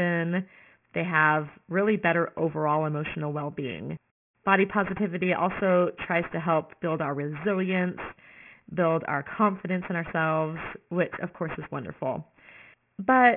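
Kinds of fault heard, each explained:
Aliasing, throughout the clip: the audio was brought down to a lower sample rate, which fits a drop from 44.1 kHz to about 6 kHz, without first removing content above the new limit of 3 kHz. Sibilant and other high-frequency speech energy folds back below 3 kHz as unrelated, inharmonic tones, sitting only modestly below the speech itself. Fricatives sound gritty and metallic, and the spectrum stays full right up to the 3 kHz edge.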